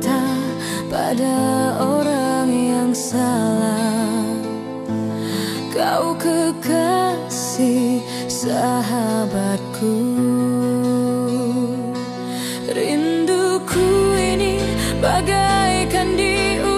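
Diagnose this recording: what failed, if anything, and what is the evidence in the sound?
Nothing in the signal chain audibly failed: the level, timing and continuity of the signal hold steady, with no dropouts, distortion or interruptions anywhere in the recording.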